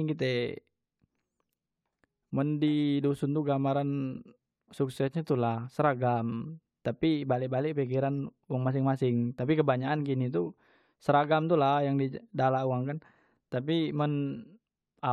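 Speech, with one brief fault: from 5.08 to 5.13 s, just before "nyo tula seragam tapi", the level falls abruptly by about 6 dB for roughly 50 ms, which is the sound of one channel dropping out. With one stereo side gone, the mono sum loses half of everything shared between channels. The likely cause is a momentary loss of one channel upstream. On a waveform this shows as a sudden step down to half amplitude and back, and on a spectrogram as a thin, uniformly dimmer vertical band across all frequencies.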